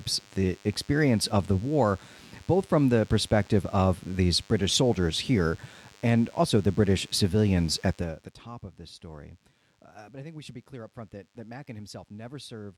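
Right from the start there's a DECT cordless phone buzz under the whole speech track: a thin, steady 100 Hz buzz full of harmonics, sitting about 30 dB below the voice. A nearby DECT handset or base is bursting every 10 ms, and the audio circuitry is rectifying it.

Then from 7.86 to 8.34 s, just before "of this story", you get zipper noise. The level drops by about 20 dB in crude 1 dB steps, roughly forty a second, with no smoothing, so each jump clicks and the fade comes out as a fast ticking zip.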